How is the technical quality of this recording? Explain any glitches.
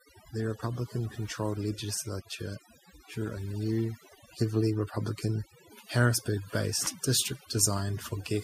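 Overdone noise removal runs throughout the speech. A noise reduction stage set too aggressively drives individual frequency bands down or out whenever they sit near its noise estimate, taking softer parts of the voice along. The background drops and breaks up into twinkling specks.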